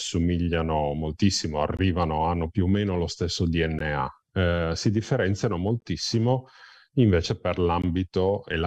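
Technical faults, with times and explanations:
1.77, 3.79, 5.80 and 7.82 s: gap at a join of encoded pieces. The speech drops out briefly at four points spaced 2.0 s apart, about 19 ms at the first and 16 ms at the others, then resumes where it left off. The audio was encoded as separate 2-second pieces and joined without trimming, so each piece's start-up delay and final-frame padding remain as silence. The edges are smeared by the codec.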